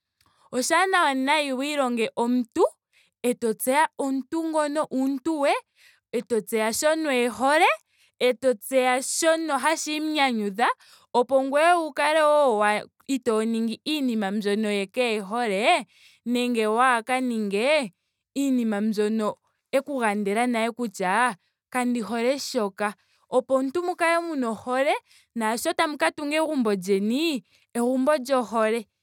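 No technical faults are audible.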